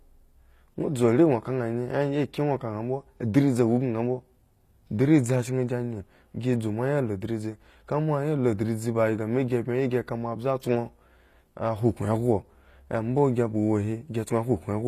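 Speech, with plainly audible compression damage throughout. The treble sounds rebuilt rather than captured: s sounds come out gritty and metallic, and nothing remains above 14.9 kHz. The likely cause is HE-AAC compression, whose spectral band replication synthesises highs from copied lower bands, consistent with roughly 24 kbps.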